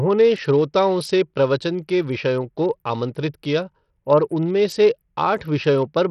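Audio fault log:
throughout, Bluetooth SBC compression: nothing above 14.5 kHz and a heavy, gritty edge on the speech, likely SBC with a tiny bit pool, sounding near 64 kbps.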